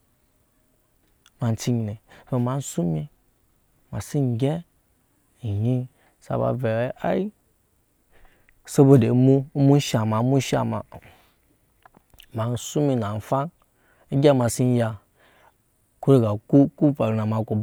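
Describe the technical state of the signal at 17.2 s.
At 17.2 s the speech signal is intact, with no audible fault at that moment.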